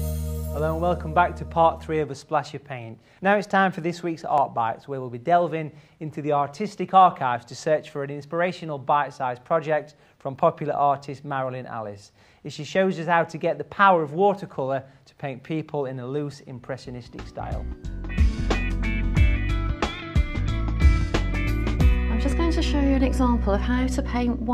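At 4.38 s there's a short skip where around 20 ms of sound goes missing and the two sides butt together, likely audio missing between chunks from a recorder working in 6-second blocks.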